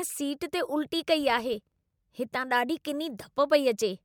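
From 1.21 s to 2.01 s, after "सीट ते उल्टी" and ending before "हितां ॾाढी", the speech carries a filter restarted on every block. The filter drops its state at each block boundary, adding a small transient each time. These form a level-following buzz at about 43 Hz, which fits a 1024-sample block.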